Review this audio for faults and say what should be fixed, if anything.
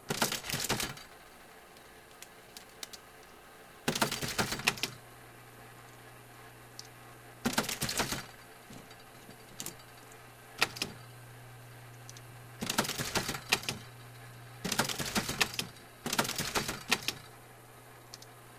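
From 0.88 s to 4.57 s there is a crude rate conversion: a gritty, inharmonic fizz rides on the louder and brighter parts of the sound. The artefact fits a 32 kHz to 48 kHz change done by nearest-sample repetition, a 3:2 ratio, so samples are duplicated in a fixed repeating pattern with no interpolation filter. That stair-step error folds into tones unrelated to the source, sitting only around 15 dB below the signal. To prevent it, resample from 32 kHz to 48 kHz with a proper band-limited polyphase or windowed-sinc converter instead of sample repetition.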